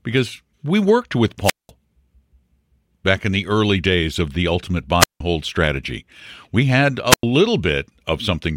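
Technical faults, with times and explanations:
1.43–1.70 s, 4.99–5.20 s, 7.09–7.23 s, wireless microphone squelch dropout: hiss rises, then silent holes of 194, 168 and 97 ms, the first after "because we worked with". A fading radio signal trips the receiver's squelch.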